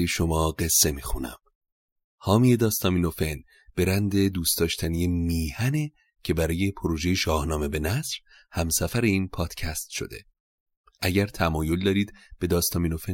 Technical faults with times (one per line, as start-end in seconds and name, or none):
none